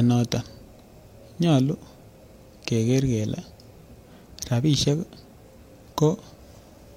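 Speech recording with nothing technically wrong to report.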